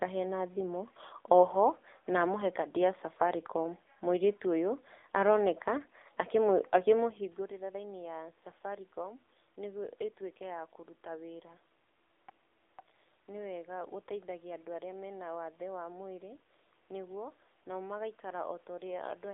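From start to finish, the speech passes through an AMR narrowband mobile codec. The band runs only from 300 Hz to 3.6 kHz, so the voice sounds thin and boxed in. The codec models the vocal tract and drives it with a few pulses per 5 ms subframe. At this low rate, the damage is plain. The voice turns buzzy and synthetic, which fits a 7.4 kbps mode. The room noise swirls and warbles. The level shift near 7 s comes from the talker moving.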